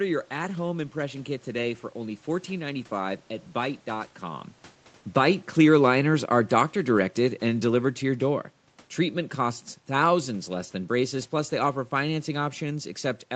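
From 5.01 s to 8.46 s the automatic gain falling fault sets in: the gain control judged the input too loud or its background noise too strong and pulled its gain down, by about 5 dB in all. The speech sinks gradually over those three and a half seconds, and the room noise behind it drops by the same amount, which separates it from the talker shifting position around 4 s. Everything sits under an 8 kHz ceiling from the call path.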